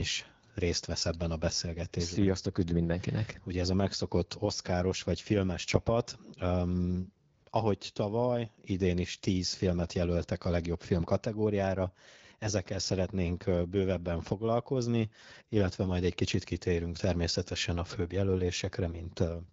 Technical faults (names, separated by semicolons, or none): none